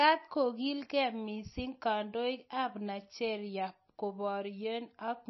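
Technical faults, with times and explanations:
Throughout, MP3 compression: the speech sounds dull and muffled, with nothing above 5.8 kHz, and carries a plainly audible watery, swirling texture. The likely cause is an MP3 encoder short of bits, which fits a low bitrate of roughly 26 kbps. To save data it removed all treble above a fixed cut-off and dropped quiet frequency components that then flicker in and out from frame to frame, producing the swirl.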